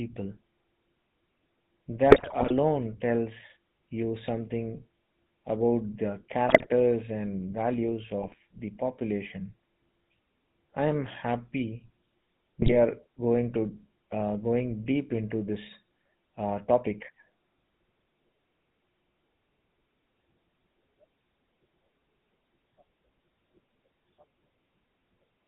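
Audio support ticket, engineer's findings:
GSM full-rate codec, whole clip. Buzzy, gravelly roughness on the speech. Nothing above 4 kHz. Fits a 13 kbps full-rate stream. Vocal-tract filter driven by regular pulses, only every third excitation sample kept. Damage plainly audible.

GSM bit errors. Squawks, pops, gargling. 2.1–2.53 s, before "tells you something about". 6.48–6.67 s, after "you something about the". 8.22–8.38 s, before "the population". 12.62–12.72 s. Corrupted filter, pitch or gain values bend the spectrum and spike level per frame.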